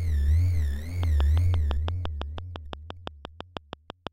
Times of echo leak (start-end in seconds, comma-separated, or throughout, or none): none